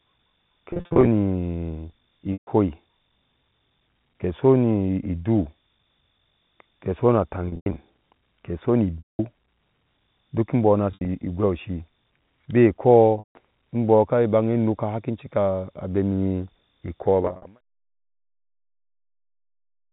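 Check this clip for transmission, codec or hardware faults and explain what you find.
Yes, there are transmission faults: seven bursts of packet loss with pitch repetition, heard as brief held, buzzy stretches where the speech freezes on one tone before resuming.

They fall at 0.71 to 1.07 s, 2.33 to 2.47 s, 7.46 to 7.76 s just after "ke sona", 8.98 to 9.19 s, 10.91 to 11.08 s just after "duk imbɔɔ no", 13.19 to 13.35 s just before "mbɔɔ ka", and 17.23 to 17.45 s.

In each burst, the receiver bridged the missing audio by looping the last pitch period and fading it down. Between 110 and 240 ms of audio was lost per burst. Several bursts are scattered runs of 50 to 100 ms, so the buzz flickers rather than holding steady.

The narrow telephone band of the G.711 A-law coding is audible throughout. The gentle fade-out ending at 17.61 s overlaps the last dropout.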